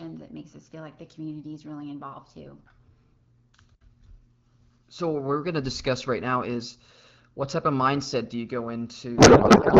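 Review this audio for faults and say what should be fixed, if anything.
From 9.17 s to the end at 9.80 s, the speech gives way to garbled noise and warble that barely tracks it. This is a codec payload misread: the AMR-WB decoder, clear at 12.65 kbit/s before this point, is pulling fields from the wrong bit positions, which fits octet-aligned frames being parsed as bandwidth-efficient. Prevent it by negotiating and enforcing a single AMR payload format at both ends of the session.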